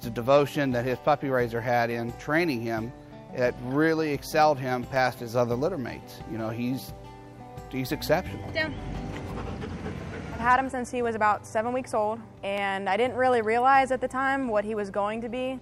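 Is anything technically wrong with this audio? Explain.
Yes. A regular click runs through the audio from 0.39 s to 14.86 s. It repeats every 0.76 s, about twenty times in all. These are clock drift buffer slips. The likely cause is two devices running on separate clocks that disagree by something around 200 ppm. The buffer between them creeps until it overflows or runs dry. Then a handful of samples is dropped or repeated. Each slip breaks the waveform and is heard as a short, evenly spaced tick.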